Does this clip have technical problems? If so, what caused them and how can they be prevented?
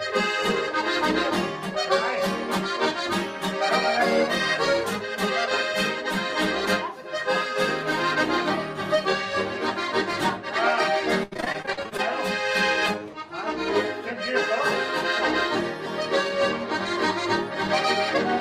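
Yes. Between 11.23 and 12.00 s there's repeated packet loss, hence the choppy, robotic sound. About a dozen dropouts, the longest 80 ms, each get patched by stretching the previous sound, so roughly a third of that stretch is filler. A steadier network path or bigger jitter buffer would prevent it.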